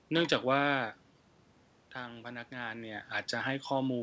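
No faults are audible in the speech; the room noise and the level shifts around 0.5 s and 2.5 s, where the talker moves relative to the microphone, belong to the recording, and the absence of content above 8 kHz is the normal band limit of a wideband call path, which fits G.722.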